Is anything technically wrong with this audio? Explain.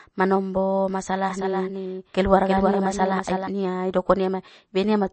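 Yes, there are two problems. Throughout the speech, a heavily starved lossy encoder, likely MP3 at a very low bitrate of around 32 kbps, discards everything above 8.4 kHz and drops weak frequency detail frame by frame, leaving dull, watery, swirling sound with smeared consonant attacks.

From 1.30 s to 3.48 s, just after "manombo masalah", a doubled audio track appears, likely a second copy of the same signal mixed in out of step. It trails by roughly 300 ms at about 5 dB lower, with no reverberant tail, and cuts in and out abruptly.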